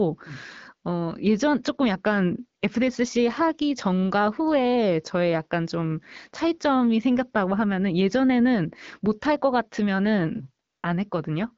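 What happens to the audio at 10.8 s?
The real background drops out between 10.69 and 10.83 s and is replaced by a steady, smooth hiss that switches in and then out again over about 140 ms. That is AMR comfort noise. The phone judged the talker silent and stopped sending speech frames, so the receiving end filled the gap with synthetic noise built from a rough description of the background's level and spectrum. Around it, the AMR-WB codec at 12.65 kbit/s keeps the speech clear.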